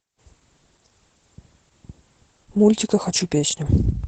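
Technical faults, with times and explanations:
Throughout: Opus voice compression. The speech is plainly damaged by low-rate coding. Nothing above about 8 kHz comes through, so the top end sounds dull and muffled. Vowels carry a hoarse, slightly robotic edge. The linear-prediction coder keeps the broad shape of the voice but spends very few bits on the fine excitation detail underneath it. That coarse detail is what turns rough. The band limit and the roughness together fit wideband Opus voice mode at around 12 kbps.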